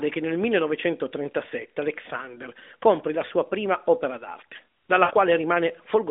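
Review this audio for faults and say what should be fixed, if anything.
Lost AMR speech frames from 5.04 to 5.12 s. For about 60 ms, which fits three consecutive 20 ms frames lost, the narrowband decoder repeats its last good pitch and vocal tract settings at falling gain, so the speech sounds drawn out and fading before it returns. A more robust AMR mode or stronger error protection on the radio link would reduce these frame losses.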